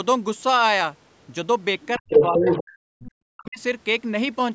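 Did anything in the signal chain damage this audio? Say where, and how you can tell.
Yes, at the call-processing stage. Speech suppressed in double talk: the speech drops away from 1.98 to 3.06 s and again from 3.31 to 3.60 s, falling by roughly 40 dB at its deepest. The likely cause is an echo canceller that ducked the near talker while the far side was also active.

The other side's voice leaking through appears from 2.13 to 2.63 s, about 5 dB louder than the speech, and as a brief faint scrap near 3.1 s, about 20 dB down. That residual loudspeaker signal was likely left in the microphone path by incomplete echo cancellation.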